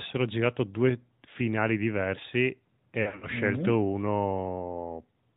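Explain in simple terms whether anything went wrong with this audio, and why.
The recording went through the AMR narrowband mobile codec, the speech compression used on older 2G and 3G phone calls. It only keeps sound up to 4 kHz and rebuilds speech from a simplified model of the throat and mouth. So the whole clip sounds thin and boxed-in, like a phone line. The compression damage is plainly audible: the speech has a buzzy, artificial edge throughout.

Later, radio errors corrupted some of the small packets of speech, causing lost AMR speech frames. The decoder filled each gap by repeating its last good guess at the sound, letting it fade. Right after "due finali diversi e", from 3.02 to 3.27 s, several short dropouts are scattered over about a fifth of a second, the longest lasting 60 ms. They sound like brief dips and warbles, and the voice comes back weak or rough for a moment.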